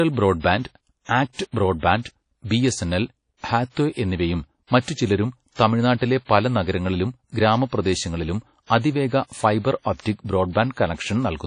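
A low-bitrate transform codec, likely WMA at around 32 kbps, has run through the whole speech clip, cutting everything above 10.1 kHz and coarsely quantising what remains, so the voice sounds dull, ringing and washy, with hiss that swells and fades alongside it. Where sharp onsets land late in a codec block, noise meant for the louder attack fills the quiet just ahead of it. This pre-echo comes at 8.66 to 8.70 s and 8.80 to 8.84 s, right after "പല നഗരങ്ങളിലും ഗ്രാമപ്രദേശങ്ങളിലും", and again at 10.00 to 10.06 s. Each is a brief hiss of 39 to 51 ms that blurs the attack that follows.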